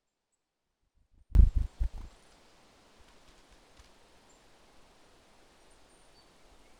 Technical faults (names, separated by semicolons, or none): one channel inverted